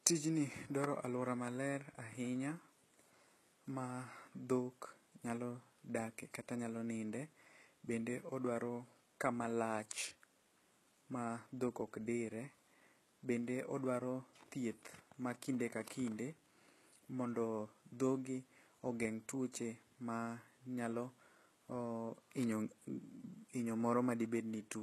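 From start to end, the speech has no content above 12.4 kHz. The upper treble sounds synthetic, and s sounds come out gritty and lispy. This points to HE-AAC compression, likely at a very low bitrate near 16 kbps, with the treble copied up from lower bands.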